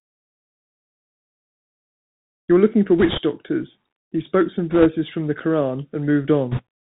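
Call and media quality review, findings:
Bluetooth CVSD headset codec, whole clip: narrowband link, consistent with 64 kbit/s CVSD, one-bit delta coding with adaptive step. Band stops near 4 kHz; loud high-frequency speech outruns the step and distorts; s sounds scratchy; granular hiss under speech. Damage plainly audible.

Bit errors on a Bluetooth voice link, 3.00–3.18 s, 4.71–4.87 s, 6.51–6.62 s: flipped bits on the CVSD stream, around a few percent, worse in the last burst. Each bit carries little weight and its effect decays, so no loud clicks, just short rushing, crackly noise over the speech, heaviest near 6.5 s.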